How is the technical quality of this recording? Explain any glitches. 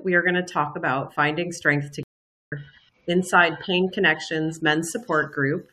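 There is one glitch, a stream reconnect from 2.03 s to 2.52 s. The connection dropped, leaving 0.48 s of silence, then the player restarted its decoder on the live stream. When sound returns it has jumped roughly 0.4 s ahead, so that stretch is skipped.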